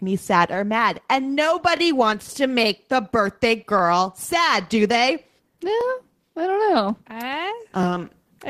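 A speech clip with overlapping chunks. A short stutter recurs at 1.77 to 1.79 s, 3.79 to 3.81 s, 5.81 to 5.83 s and 7.83 to 7.85 s. The audio was handled in 2-second blocks. Each block began about 21 ms before the previous one finished. That sliver of sound therefore plays twice at every join. The result is a brief doubled fragment, heard as a tick or hiccup roughly every two seconds.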